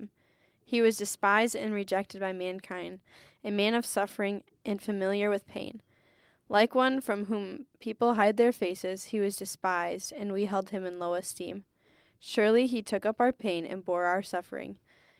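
No technical faults can be heard anywhere in this speech recording.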